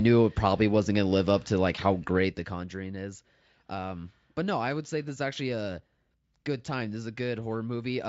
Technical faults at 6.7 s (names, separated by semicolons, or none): none